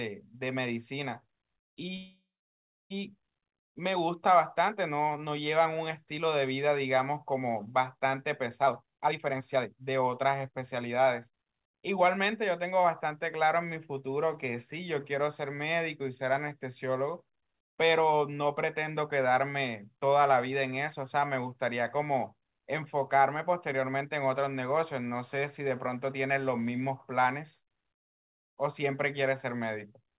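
Call audio freeze, 1.96 to 2.92 s: the speech stops, the last sound decays into about 0.64 s of silence, then resumes where it left off, likely from delayed packets draining the jitter buffer.

Jitter buffer speed-up, 8.62 to 11.33 s: the buffer trims the backlog by cutting short pitch-period slices, so speech runs at 134% speed at unchanged pitch, losing roughly a second.

Throughout, nothing is heard above 4 kHz, which points to a narrowband call codec such as G.711 mu-law.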